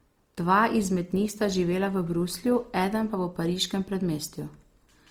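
From start to finish, the speech sounds grainy and rough. The upper range carries a noisy, hashy texture, yet there are few of the swirling holes typical of MP3. The likely cause is Opus compression in its music (CELT) mode. Starved of bits, the encoder keeps each band's energy but refills the detail with folded copies of lower bands or with noise. The damage is plainly audible, which fits a rate of around 24 kbps. Bandwidth stays full, reaching about 20.3 kHz.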